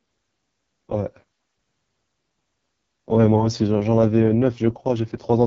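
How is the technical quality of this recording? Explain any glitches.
The technical quality is poor because of heavy codec damage. Throughout, the AMR wideband (HD Voice) codec sounds rough and raspy, consistent with its lowest 6.6 kbit/s mode. A spectrogram shows energy ending near 7.4 kHz, with smeared, noise-like upper bands.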